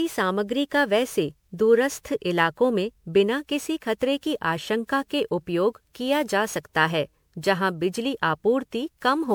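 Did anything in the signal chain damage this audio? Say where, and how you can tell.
Yes. Throughout the speech there is a swirly, hollow quality, with smeared consonant attacks and a watery, phasey texture that is heavier than a single pass of a decent lossy codec would leave, while the band still reaches about 21 kHz. The damage is at the codec stage, likely generation loss from the audio being decoded and re-encoded as MP3 around ten times, which fits a 128 kbit/s chain. Each pass requantises on a shifted frame grid, so noise and spectral holes accumulate.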